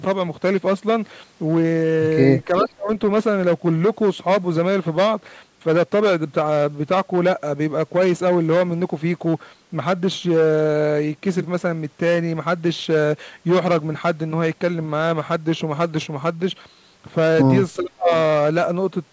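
From 2.45 to 2.89 s and 17.76 to 18.11 s the speech drops by roughly 30 dB, likely speech suppressed in double talk as the echo canceller ducked the speech along with the loudspeaker echo.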